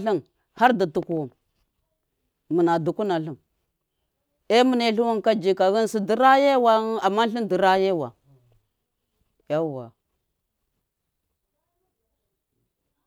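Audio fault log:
Throughout: sample clock jitter, a faint hiss clinging to loud, sharp speech sounds, vanishing in pauses, unlike steady noise; roughly 1.5 µs timing wobble, error about 45 dB down.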